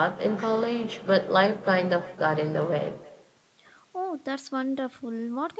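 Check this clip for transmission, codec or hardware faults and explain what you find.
There's one real problem here: echo with no canceller, running the whole way through. The far end is playing the call on a loudspeaker and its mic feeds that straight back, so every phrase returns roughly a third of a second later, about 20 dB down and thin. The top stopping around 8 kHz is just the call codec's normal bandwidth.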